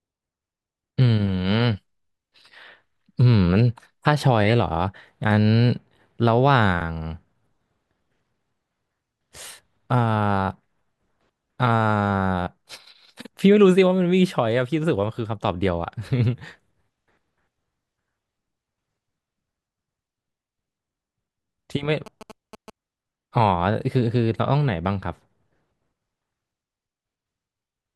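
Speech recording with one clear interference problem: GSM signalling bursts from 22.06 to 22.70 s. You get that galloping dit-dit-dit of short buzzes repeating at 216.7 Hz, sitting roughly 20 dB below the speech. A 2G phone close by was sending its brief signalling bursts, and something in the audio chain rectified the radio energy, turning each burst into an audible click-buzz.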